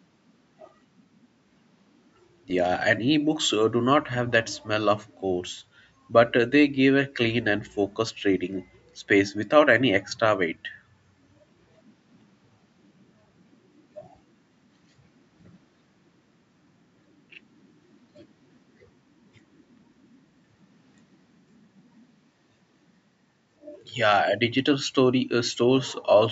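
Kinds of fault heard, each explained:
No technical faults are audible in this recording.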